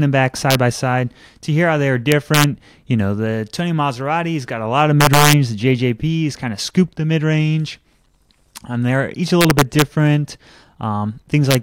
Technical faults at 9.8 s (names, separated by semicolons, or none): integer overflow